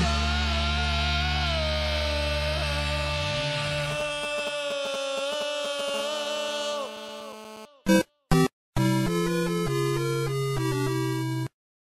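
GSM signalling bursts run from 3.91 to 5.90 s: a galloping dit-dit-dit of ticks and brief buzzes at around 217 Hz, roughly 10 dB below the sound. A 2G phone close by is exchanging short groups of radio pulses with its network, as it does ahead of an incoming call or message. The audio circuitry rectifies those pulses into audible clicks and buzz fragments that have nothing to do with the sound itself.

GSM phone buzz follows from 5.94 to 7.65 s: a hard, raspy, continuous buzz at 216.7 Hz, rich in harmonics, sitting about 15 dB under the sound. The phone is now in a call and transmits a burst 217 times every second without pause. Rectified by the audio path, this steady train of radio pulses turns into a constant, gritty drone that holds for the whole stretch.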